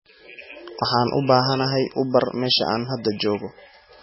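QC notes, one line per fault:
Throughout: MP3 compression, likely at a bitrate as low as about 16 kbps. The starved encoder cuts everything above 5.6 kHz and drops weak frequency lines that flicker between frames. The speech sounds heavily dull, watery and swirly, with smeared attacks.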